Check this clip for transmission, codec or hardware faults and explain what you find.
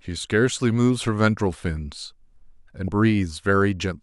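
One codec-related fault is present in the speech. From 2.85 to 2.88 s there is damaged data in the compressed stream: corrupted bytes cause the decoder to misread frames and lose sync while it searches for the next valid header, producing a brief glitch lasting about 30 ms.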